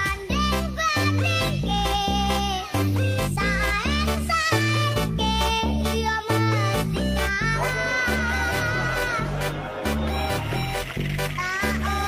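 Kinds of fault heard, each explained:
No kinds of fault are heard in this clip.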